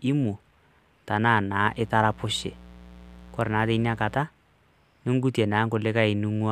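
In this speech clip, a steady, raspy mains buzz runs from 1.64 to 4.21 s, about 20 dB below the speech. Switching spikes at twice 60 Hz leak in, spraying harmonics into the kilohertz range.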